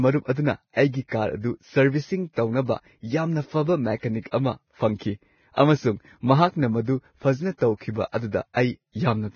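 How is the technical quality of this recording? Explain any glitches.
Technical quality is poor, with heavy lossy-codec damage across the whole recording and one audible pre-echo.

Throughout the speech, nothing is present above 6.6 kHz, and the remaining treble is hissy and grainy, with rough sibilants and blurred consonant onsets. This is likely Vorbis compression at a very low bitrate, roughly 18 kbps. The encoder lowers the cut-off and quantises upper detail so coarsely that it turns into noise.

At 5.53 to 5.58 s, a pre-echo appears as about 48 ms of hiss just ahead of a sharp onset, which then sounds softened and smeared. The transform block containing the attack spreads quantisation noise, sized for the loud part, back into the quiet stretch before it.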